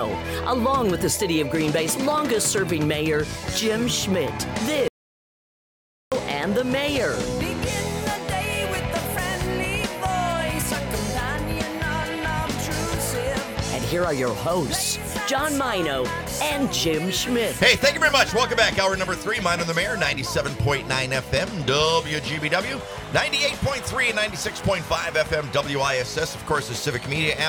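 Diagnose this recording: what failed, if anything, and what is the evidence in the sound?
The signal path failed at the input end, upstream of the recorder: an audio dropout to silence from 4.88 s to 6.12 s. The sound stops abruptly mid-flow and returns just as abruptly, with about 1.24 s of audio lost. The gap holds silence with no room tone. On a waveform it is a flat line. On a spectrogram it is a dark vertical band. The likely cause is a lost input, such as a disconnected cable or link or a brief mute, while the recorder kept writing zeros.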